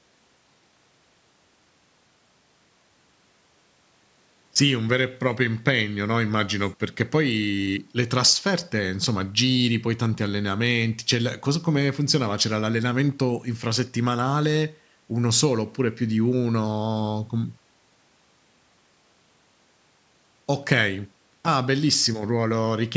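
No technical faults are audible.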